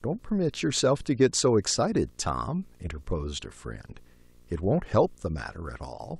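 From the first moment to the last, a video or display buzz sits well below the speech, roughly 35 dB down. A screen or video cable is leaking its picture timing into the audio, so the buzz repeats at the 60 Hz field rate with a gritty hash riding above it. Mains hum can share that 60 Hz fundamental but stays smooth and tonal. This buzz is raspy and edged, because each field's pulse carries sharp, broadband energy.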